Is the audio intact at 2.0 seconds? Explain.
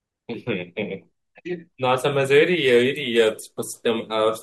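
Yes, the audio is intact at 2.0 seconds, with no dropout, click, distortion or other fault at that moment.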